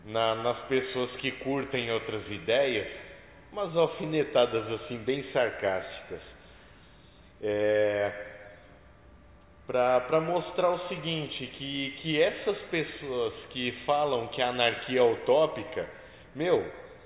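Nothing stood out as a technical problem on listening to the recording.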